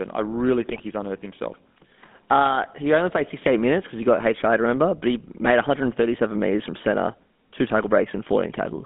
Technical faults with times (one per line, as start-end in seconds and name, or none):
0.00-8.85 GSM full-rate codec
0.68-0.80 GSM bit errors